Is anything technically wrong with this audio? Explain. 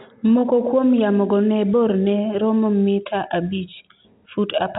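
No, nothing in this speech clip points to a technical fault. It has the narrow sound of G.711 telephone coding, with nothing above about 3.8 kHz, which fits a 64 kbps mu-law telephone line.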